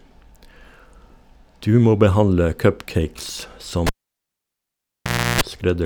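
At 3.87 s the cable gets pulled and plugged in while live: a pop, then about 1.5 s of near silence, a roughly 330 ms burst of 60 Hz mains buzz as just the tip makes contact, and another pop when the speech returns at 5.41 s.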